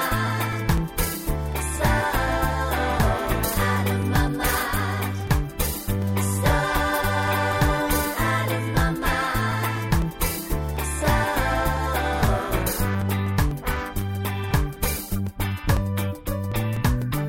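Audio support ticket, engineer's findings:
Periodic USB or driver dropouts: steady ticks every 0.25 s from 0.27 s to 17.02 s, only where there's signal. Likely a background task stalling the USB bus or audio driver. Each stall drops a couple of milliseconds, left as silence.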